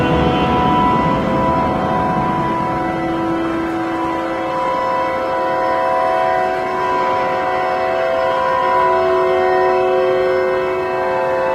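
From 1.66 to 4.77 s, a call bitrate drop makes the sound coarse and watery, consistent with the encoder falling from roughly 32 to 17 kbps for about 3 s. Unlike packet loss, nothing drops out; detail simply thins, then recovers.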